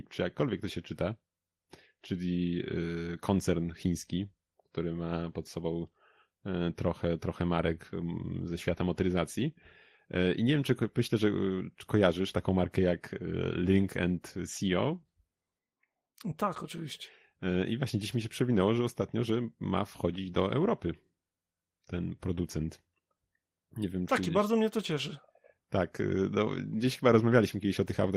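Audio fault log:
Nothing to log here, as the speech comes through the Opus voice compression at around 20 kbps with its full bandwidth intact and only the light touch you'd expect from the codec.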